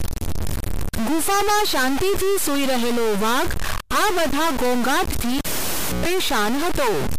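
A single data bit appears to be frozen at a fixed value for the entire speech recording, most likely a stuck bit from a broken data line or converter. Roughly half the samples are pushed off by that bit's weight, a step of about -20 dBFS, in a pattern that follows the waveform. This adds a harsh, buzzy distortion over every syllable. Because the bit flips with the sign of quiet samples, the pauses fill with a gritty noise.

From 5.38 s to 6.06 s, the cable was pulled and plugged in while live. It opens with a pop as the connection breaks, then goes nearly silent for about 0.63 s. As the plug goes back in and only its tip makes contact, a 0.12 s burst of 60 Hz mains buzz cuts through. A second pop follows as the full connection returns and the speech resumes.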